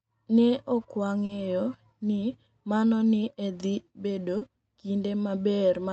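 At 1.25 s and 4.37 s, short concealed packet loss: about 40 ms of speech arrived too late, so the decoder extrapolated the preceding sound, causing brief smears.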